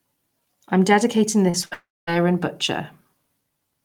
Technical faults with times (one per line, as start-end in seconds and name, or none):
1.49-1.65 short concealed packet loss
1.65-1.73 burst of packet loss
1.73-2.09 long network dropout